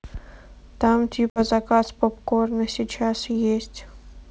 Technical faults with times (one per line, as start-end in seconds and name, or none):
1.30-1.40 packet loss on an ADPCM call